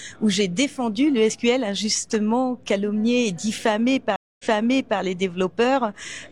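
A stream reconnect breaks the sound at 4.16 s. About 0.23 s of silence follows. Playback resumes 0.6 s earlier, repeating material, and settles by 4.99 s.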